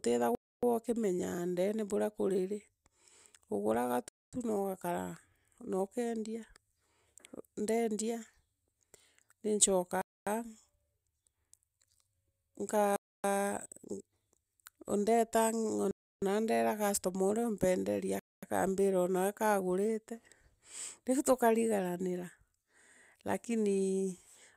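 Bluetooth stalls at 0.35, 4.09 (before "tu noogakara"), 10.02, 12.96, 15.91 and 18.19 s (before "akaambira onawe kaagurite"): the speech drops to silence for 230 to 310 ms, then resumes. The likely cause is interference delaying packets until the headphone buffer emptied.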